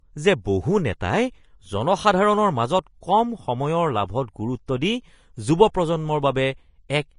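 Throughout the speech, a low-bitrate encode, likely Vorbis compression at around 30 kbps, has left nothing above 10.5 kHz and quantised the remaining treble coarsely, so fine detail turns into hiss-like noise, giving a grainy, roughened sound with softened consonant attacks.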